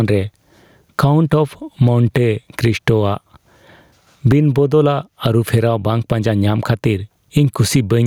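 Gain pumping runs through the whole speech clip: the gain swings by around 15 dB, ducking under every loud syllable. This is likely from a fast limiter fighting excessive mic gain. The waveform shows flattened peaks.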